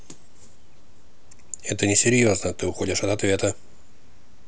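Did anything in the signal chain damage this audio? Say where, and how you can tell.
No, nothing in the chain has audibly damaged this speech recording. No stage leaves any trace that points to a fault.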